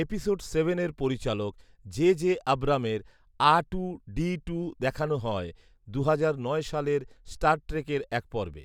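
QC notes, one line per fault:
No fault found in the speech, so there is no line to list.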